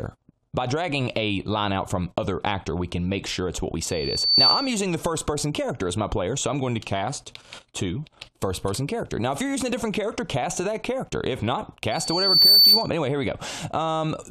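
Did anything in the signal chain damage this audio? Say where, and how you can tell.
Yes. Loudspeaker feedback squeal enters at the analogue stage, from 3.84 to 4.83 s and 11.91 to 12.90 s. A 4.5 kHz tone swells over about half a second to roughly 10, then 15 dB above the sound. The spectrogram shows a bright horizontal line: the microphone re-amplifying its own loudspeaker.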